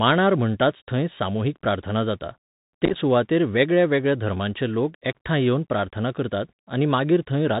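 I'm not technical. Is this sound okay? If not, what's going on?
No. The whole clip goes through a Bluetooth CVSD headset codec: narrow, phone-like speech with scratchy s sounds and a grainy hiss underneath, unlike plain muffling, which stays smooth.

Between 2.85 and 2.95 s, after "थंय सामुहीक प्रार्थना जाता" and before "सुवातेर वेगळ्यावेगळ्या धर्मांचे लोक", unconcealed Bluetooth headset packet loss chops the speech into a quick crackly burst of tiny gaps, not one clean dropout.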